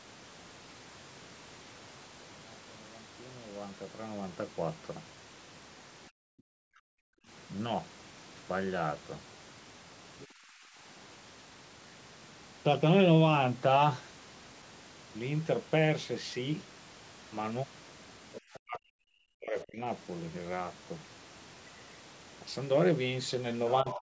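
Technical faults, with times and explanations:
6.1–7.27 s and 10.28–10.78 s, background gated by the echo canceller: the room tone behind the speech sinks away and then returns. In the first stretch it drops by about 40 dB for roughly a second. In the second it drops by about 18 dB for about half a second. The echo canceller heard its loudspeaker playing and clamped the microphone hard, taking the ambience down with it until it released.
10.19–10.27 s, 18.33–18.6 s and 23.89–23.98 s, other side's voice leaking through: short scraps of a second voice sit under the talker. The first is around 25 dB below the speech, the one near 18.3 s around 20 dB below, and the last, closer to the end, around 15 dB below. The cause is likely far-end sound from the loudspeaker that the echo canceller failed to strip from the microphone signal.
18.61–19.81 s and 23.83–24.12 s, speech suppressed in double talk: the talker's voice dips, falling by roughly 40 dB. 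The first stretch lasts about a second, and the second lasts about a fifth of a second at the very end. The first comes right after far-end leakage and the second overlaps it, so the likely cause is both sides speaking at once, with the echo canceller unable to separate its own talker from the echo and turning both down.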